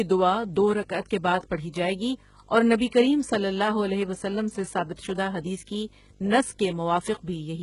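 From start to finish there's a video or display buzz riding under the speech: a steady 50 Hz field-rate drone with grainy hash layered above it, sitting roughly 25 dB below the speech. On top of that there's a very high tone at 15.6 kHz, the line-rate tone. That pattern is what you get when a screen or its video cabling leaks into the audio path, so the picture's own timing shows up as sound.

The speech itself also has a synthetic sheen throughout, most likely from HE-AAC compression pushed hard, which fits a very low bitrate in the region of 12 kbps. The damage is heavy. The treble isn't the real treble but lower bands copied upward and roughly reshaped, so it doesn't quite line up with the body of the sound. The s sounds come out gritty and lispy, and nothing of that rebuilt top reaches past 11 kHz.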